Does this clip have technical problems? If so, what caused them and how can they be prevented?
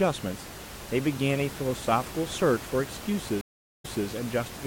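Yes. At 3.41 s the stream connection dropped, so the player stopped producing audio, reconnected and started a new decoder partway through the stream. The result is a 0.43 s silence, and when the speech returns it has jumped back about 0.24 s, because the server resent a burst of data already played. The repeat settles by 4.07 s. The room noise, about 13 dB below the speech, is part of the recording. To prevent this, use a larger client buffer and have the player skip audio it has already played after reconnecting.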